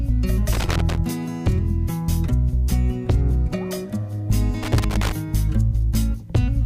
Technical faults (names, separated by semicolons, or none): loose connector crackle